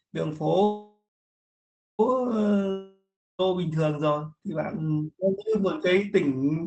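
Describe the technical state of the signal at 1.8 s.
A call audio freeze runs from 0.63 s to 2.01 s, so at 1.8 s the signal is still inside it. The likely cause is packets held up in transit, leaving the jitter buffer empty. The receiver extends the last sound as a fading buzz, which dies into near-silence for roughly the final 0.95 s of the gap, covering 1.8 s. When audio resumes it picks up where it stopped, losing nothing but arriving about 1.36 s later.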